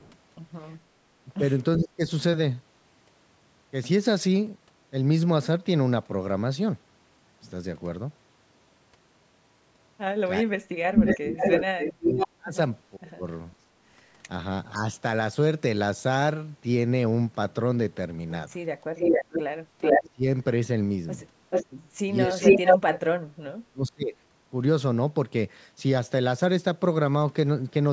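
From 0 to 0.16 s there is a faint echo leak, a copy of the speech about 392 ms late and far quieter than the talker, most likely loudspeaker sound that the far side's echo canceller did not fully remove. On a spectrogram it shows as a weak repeat of the speech's harmonic pattern, shifted later in time.

Between 1.17 and 2.03 s the speech is suppressed in double talk. Over roughly a third of a second it dips by around 20 dB, likely because the canceller turned down the talker while the other side spoke. The waveform envelope pinches in.

From 10.43 to 13.25 s the same suppression goes much deeper, close to 40 dB, across about a second and a half. Overlapping this, from 10.96 to 12.28 s, an echo leak arrives about 509 ms late at roughly the talker's own level, likely the result of the echo canceller letting the loudspeaker signal through. On the spectrogram its harmonic stripes sit over the suppressed stretch, so the echo stands out as clearly as the talker.

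From 18.96 to 20.09 s an echo leak about 439 ms late is slightly louder than the talker. This is likely because the canceller let the loudspeaker signal through, and a second, offset copy of the speech contours is visible. At its tail, from 19.98 to 20.24 s, the speech is suppressed in double talk by around 25 dB for about a third of a second. The likely cause is the canceller ducking the talker while the other side spoke.

From 21.5 to 22.79 s another echo leak at about 439 ms is clearly louder than the speech, so the delayed copy dominates the waveform. It is likely leaked loudspeaker sound. It runs into suppression in double talk from 22.28 to 24.16 s, with drops near 40 dB over about a second and a half. That is likely the canceller muting the talker during overlap. Across the whole clip, the call microphone processing leaves nothing above 8 kHz on the spectrogram.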